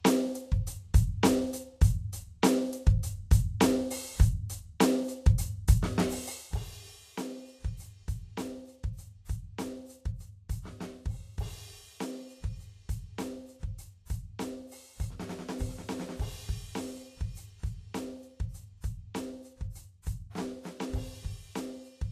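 Music, and compression damage is plainly audible throughout: the treble sounds hissy and grainy, tones have a roughened edge, and attacks are smeared. On a spectrogram the content stops at a hard ceiling near 14.2 kHz, and the band below it breaks into speckled, noise-like patches where fine detail should be. This is likely Vorbis compression at a low bitrate, which the sound suggests is somewhere around 33 kbps. At that rate the encoder cuts off the top of the spectrum and quantises the remaining treble so coarsely that detail is replaced with noise of similar energy. From 6.25 to 6.61 s there is zipper noise, a ticking buzz that rides on the music while its level drops by roughly 15 dB. The gain moves in 1 dB steps at around forty steps a second with no smoothing between them. Each jump leaves a small click, so the waveform envelope descends as a staircase, and the spectrogram shows a row of faint vertical lines spaced about 25 ms apart across that stretch.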